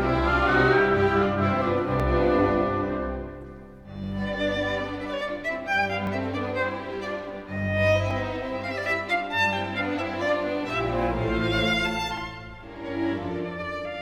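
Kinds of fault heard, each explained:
Clock drift buffer slips: A regular click recurs about every 2.03 s from roughly 2.0 s to 12.2 s, around seven in all, which points to two devices whose clocks likely disagree by something like 400 ppm, so the buffer between them periodically drops or repeats a few dozen samples. On the waveform each event is a small discontinuity or step; on a spectrogram it is a thin vertical broadband line, evenly spaced.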